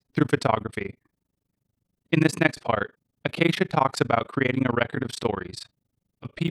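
From start to finish the speech carries a fast, rough flutter, a tremolo pulsing around 30 times a second and swinging by about 60 dB. This is overlap-add ripple: frames were windowed and rejoined with overlaps that fail to sum to constant gain, so level dips every frame.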